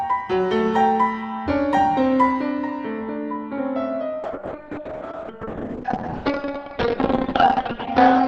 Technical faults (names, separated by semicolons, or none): call bitrate drop